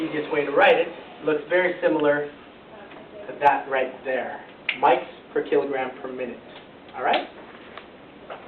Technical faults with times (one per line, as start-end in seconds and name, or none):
none